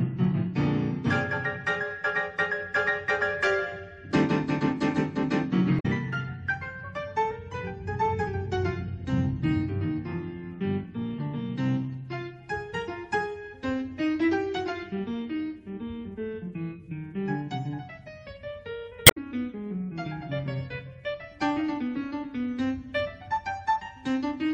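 Audio with damaged data in a compressed stream at 5.76 to 5.86 s and 19.03 to 19.17 s: corrupted frames briefly throw the decoder out of sync, producing short glitches.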